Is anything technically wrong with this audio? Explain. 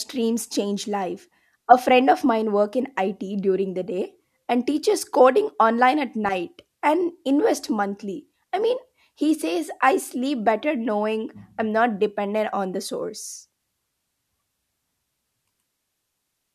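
No, nothing in this speech recording stood out as technically wrong on listening.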